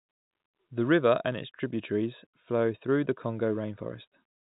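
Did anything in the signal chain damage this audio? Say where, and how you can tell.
No, nothing in the chain has harmed this speech; it simply carries the sound of ordinary G.711 telephone coding, with nothing above about 3.8 kHz, which is just what that format passes.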